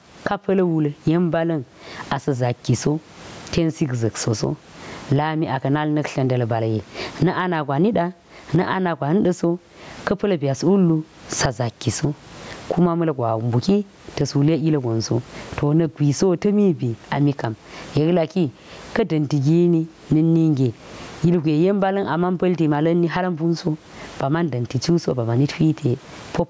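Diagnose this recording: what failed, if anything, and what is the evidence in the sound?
Gain pumping throughout, at the microphone gain stage: the gain swings around 25 dB, pulled down on every loud sound, likely a fast limiter; a gate would silence pauses instead.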